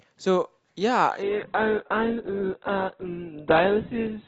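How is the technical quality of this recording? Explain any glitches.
The recording loses quality abruptly partway through, because of a single fault.

From 1.23 s to the end, the player switched to an adaptive stream at a lower bitrate, likely after the connection slowed. The speech turns dull, with nothing above 4.2 kHz. That fits a drop from a 64 to an 8 kbit/s Opus stream. A spectrogram shows the upper band sharply cut off at 1.23 s, while the waveform shows no gap.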